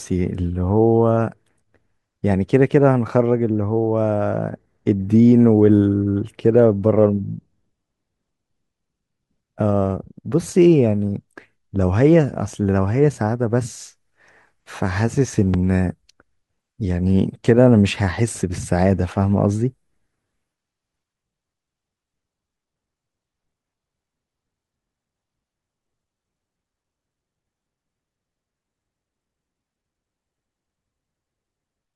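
At 15.54 to 15.56 s a single loud pop, roughly 10 dB above the speech, cuts in as a sharp thump while the talking continues beneath it. It is likely an electrical transient, such as a switch or static discharge. On the waveform it appears as a tall, narrow spike, and on the spectrogram as a thin vertical stripe across all frequencies.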